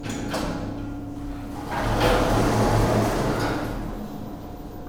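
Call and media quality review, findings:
Tick at 2.93 s: one sharp click, with the sound briefly dipping. Block of digital silence, about 2.7 ms of zeros, a length that fits a 128-sample buffer. Probable component: audio output or processing buffer, left empty when the program missed its deadline. The cut to silence and back has no fade, so the two edges merge into one click.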